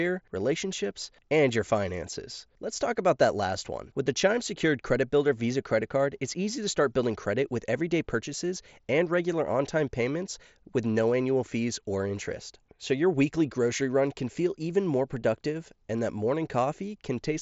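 No technical faults occur in this speech; it carries the normal character of a wideband Bluetooth mSBC headset link, with nothing above about 7.7 kHz and a light grainy texture on the louder sounds.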